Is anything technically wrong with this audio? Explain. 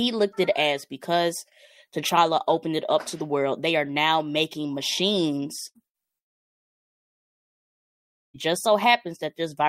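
Yes. Two bursts of packet loss, at 5.67 to 5.78 s and 5.87 to 5.97 s, each cut about 80 ms of speech. The receiver extended the last sound as a short fading buzz or hiss before the speech jumped ahead. At 6.18 to 8.37 s, speech stops for about 2.2 s of near-silence, likely a long network dropout. Its length, and the concealment dying away into quiet, set it apart from the brief bursts.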